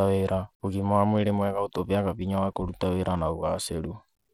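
From start to finish the speech carries plainly audible codec damage, most likely Bluetooth SBC compression at a low bitrate, something like 96 kbps. The top end thins out and flickers, and a gritty, aliased grain sits on every syllable.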